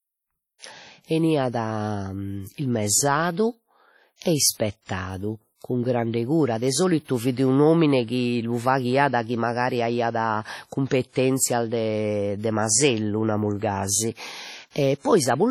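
Throughout, the speech sounds washy and ringing, with hiss that swells and fades alongside the voice. A spectrogram shows an empty band above 15.6 kHz, most likely from heavy WMA compression at a rate that fits roughly 32 kbps. At 4.16 s and again at 14.71 s, just after "de masellu namus gasi", pre-echo appears: codec noise smears about 53 ms and 45 ms ahead of a sharp onset, visible as a hiss wedge before each waveform spike.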